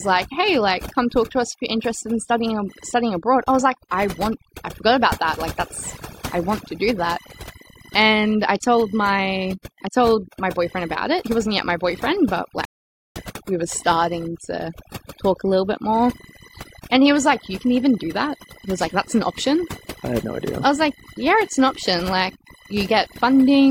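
Computer activity noise runs throughout, a buzzing chirp pulsing at roughly a thousand times a second and sitting about 20 dB below the speech. Processor or graphics load is disturbing the audio circuit's shared ground, so the interference tracks the machine's workload rather than the talking.

Overdone noise removal is also present from start to finish. A noise reducer pushed too hard is cutting frequency bands that fall near its noise estimate, taking quiet speech detail with them. The background drops and breaks up into twinkling artefacts.

A rebuffering stall occurs from 12.65 to 13.16 s, right after "yet my boyfriend but". The player ran out of downloaded audio and went silent for about half a second, then resumed exactly where it left off with "we were starting to". Nothing is lost, only time added.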